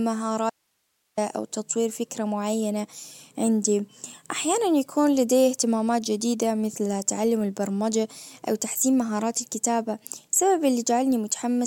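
From 0.50 to 1.17 s the speech drops out for about 0.68 s, leaving only faint hiss roughly 50 dB below the signal, then cuts back in abruptly before "او تطوير فكرة معينة". This audio dropout to a faint residue likely comes from a brief signal loss upstream while the following path stayed live.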